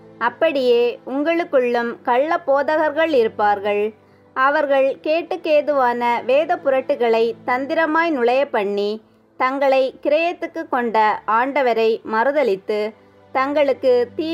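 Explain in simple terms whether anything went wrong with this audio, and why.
Nothing went wrong here; no faults can be heard.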